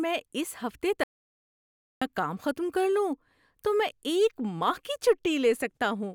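After "اس ہفتے" at 1.0 s, speech cuts to silence for 0.98 s until "کام ختم کر": audio dropout to silence, likely lost input.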